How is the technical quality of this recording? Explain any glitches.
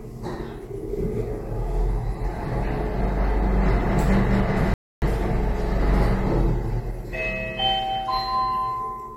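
There is one glitch, a rebuffering stall from 4.74 to 5.02 s. The sound drops to silence for about 0.28 s and then picks up exactly where it left off. The player ran out of downloaded audio and waited for more, so nothing is lost but the pause adds time.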